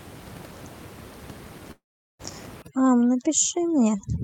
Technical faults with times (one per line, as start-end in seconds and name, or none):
1.71-2.21 long network dropout
2.62-4.24 overdone noise removal